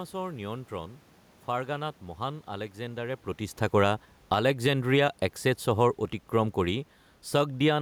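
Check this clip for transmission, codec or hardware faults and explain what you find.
There's one fault here, an automatic gain fall in the speech. From 3.62 to 4.95 s, just after "নিয়ন্ত্ৰণ ফাৰ্গানাত মহান আলেকজেণ্ডাৰে", the AGC decides the input is too hot or its background noise too strong and eases its gain down by about 5 dB. The voice and the room noise behind it sink together. That shared drop is what sets it apart from the talker shifting position around 3 s, where only the voice level changes.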